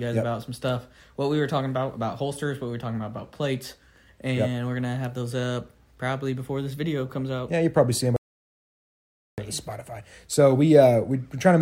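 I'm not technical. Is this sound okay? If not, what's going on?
No. The input was likely lost for about 1.2 seconds, an audio dropout to silence: from 8.16 to 9.38 s the sound cuts to total silence, and that part is gone.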